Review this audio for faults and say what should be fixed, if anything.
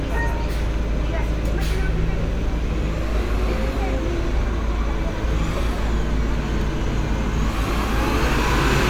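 Nothing here needs fixing; I didn't hear any technical faults anywhere in the audio, so it can stay as it is.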